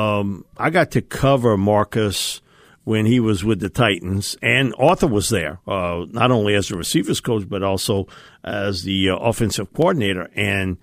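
From 0.56 s to 10.44 s, a click recurs every 0.62 s, about fifteen in all, through the speech. The steady spacing points to likely clock drift buffer slips: two unsynchronised clocks, a few hundred ppm apart, forcing a handful of samples to be dropped or repeated each time.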